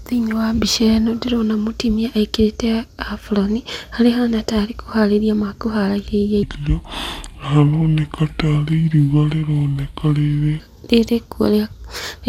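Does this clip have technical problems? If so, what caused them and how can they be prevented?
Yes. A section at the wrong speed runs from 6.43 to 10.60 s. There the speech plays at about two-thirds of its proper rate, 0.667 times, so it drags and drops by roughly seven semitones, with speed and pitch falling together. The likely cause is that this stretch was rendered against the wrong clock, as when an editor or player assumes a different sample rate for one segment. Confirming that every segment's sample rate matches the project rate before rendering would prevent it.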